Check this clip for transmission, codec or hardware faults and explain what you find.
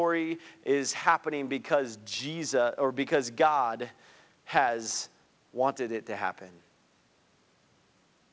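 No transmission, codec or hardware faults.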